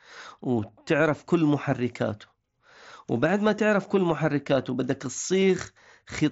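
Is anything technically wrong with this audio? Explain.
Yes. At about 5.41 s, concealed Bluetooth headset packet loss: a short run of voice packets from the headset never arrived, and the receiver filled roughly 15 ms, consistent with two lost frames, by repeating the best-matching recent stretch of waveform. Through the mSBC headset codec, this brief gap sounds like a buzzy tone held at full level, with a small warble where real audio returns.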